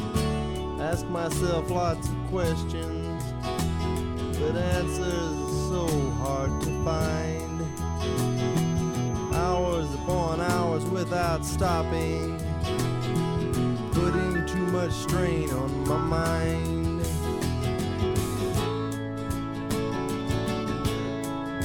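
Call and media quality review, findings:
Feedback whistle, 4.78 to 10.42 s. Likely cause: speaker-to-mic acoustic loop held at the edge of instability, with gain just under runaway. Symptom: thin, steady 6.2 kHz tone roughly 25 dB below the sound, swelling and fading slowly in level, not building.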